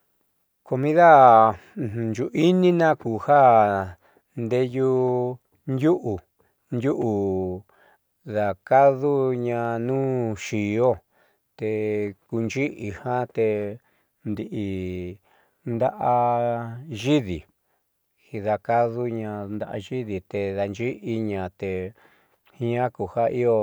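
At 9.65 s there's a single sharp click cutting through the speech, and it's most likely dropped samples. Only a couple of samples seem to be missing, a tiny fraction of a millisecond, so nothing you'd actually notice as a gap. The trouble is the waveform jumps straight from one value to a later one, and that sudden step is what pops out as the click, a thin vertical line on the spectrogram.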